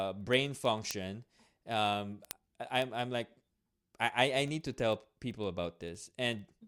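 From 0.14 s to 6.65 s, word clock ticks run under the speech. About every 70 ms, a sharp click lands, around a hundred in all. Two unlocked digital clocks drift apart by a few hundred parts per million, so one sample slips at each crossing.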